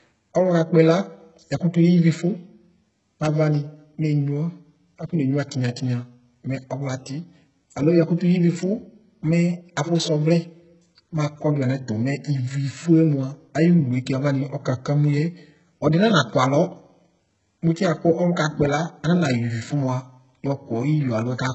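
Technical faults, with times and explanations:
Throughout: HE-AAC compression. The speech is heavily smeared and nothing sits above 8 kHz, so the top end is synthetic and thin. That points to a likely HE-AAC encode at a very low bitrate, around 8 kbps, with band replication filling in the missing treble.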